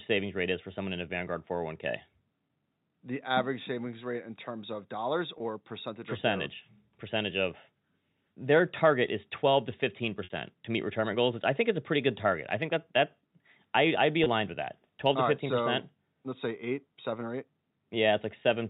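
Packet loss with pitch repetition occurs three times. The first is a 20 ms gap at 5.38–5.40 s, after "in terms of dollars". The second is a 60 ms gap at 10.24–10.30 s, before "to meet retirement goals". The third is 20 ms at 14.24–14.26 s, between "that I I'd be" and "with that". Each time the receiver bridges the hole by repeating the last pitch period, so the short gaps sound like a briefly held buzz. The longer middle one, which points to three lost packets, audibly fades before speech resumes.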